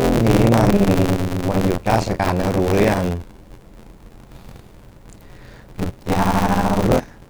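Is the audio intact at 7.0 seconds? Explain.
No. Buffer tearing runs through the whole clip: the writer and reader of a 512-sample ring buffer cross, splicing in audio about 40 ms stale, heard as an 86.1 Hz robotic buzz. Damaged data in a compressed stream hits from 6.95 to 6.97 s: corrupt frames make the decoder lose sync, giving a brief glitch.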